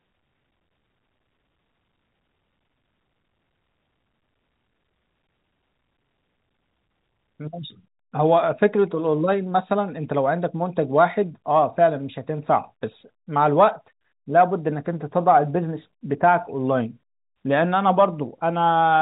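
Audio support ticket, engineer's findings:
Nothing to flag on this one; the speech is simply coming over a G.711 telephone path, so the top end tops out around 3.8 kHz like you'd expect from that kind of line.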